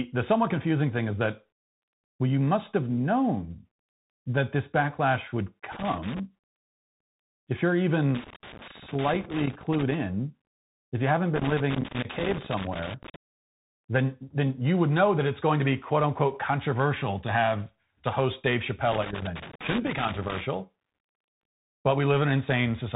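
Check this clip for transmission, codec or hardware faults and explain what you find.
Two faults are present: the whole recording has passed through a Bluetooth CVSD headset codec, and four bursts of loose connector crackle cut into it.

The Bluetooth CVSD headset codec runs for the entire clip. CVSD encodes each sample as a single up-or-down bit and adapts its step size, here at a rate that fits a 64 kbps link. Nothing above 3.8 kHz survives, so the speech sounds boxy and narrow. Sharp s sounds turn scratchy, and a grainy hiss sits underneath. On a spectrogram the energy stops abruptly at 3.8 kHz, with a speckled noise floor below it.

The loose connector crackle comes at 5.72–6.20 s (after "that this backlash would"), 8.15–9.95 s (after "if you're"), 11.36–13.16 s (after "you haven't") and 18.92–20.41 s. A contact that makes and breaks as it moves chops the signal, producing irregular scratching. 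In the waveform these show as ragged dropouts and spikes, and on a spectrogram as broadband vertical streaks.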